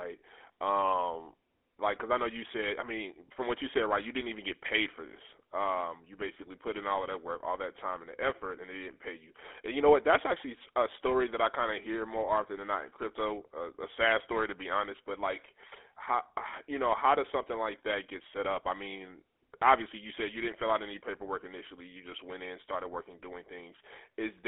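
From the first second to the last, the speech carries the GSM full-rate codec, and the damage is plainly audible. The codec models the throat and mouth as a filter, then feeds it a coarse, regularly spaced pulse train instead of the real excitation, so everything comes out buzzy and gravelly. It's squeezed into a phone line too, roughly 300 Hz to 3.5 kHz, which is what you'd expect at the 13 kbps GSM full rate.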